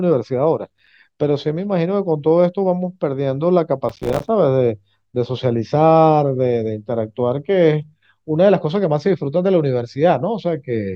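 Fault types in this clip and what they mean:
Processor overload crackle: the processor repeatedly fails to deliver its audio buffers in time, and each miss drops a short slice of silence, apparently around 5 ms, with hard edges into the speech. A brief burst of a handful of misses crackles from 0.70 to 0.88 s, and a longer run of dozens tears through from 3.89 to 4.28 s. Unlike a single dropout, it is a rapid train of tiny gaps heard as grit, not one clean hole.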